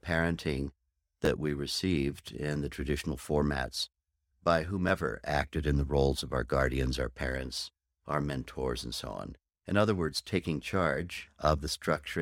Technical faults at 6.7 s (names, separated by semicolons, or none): none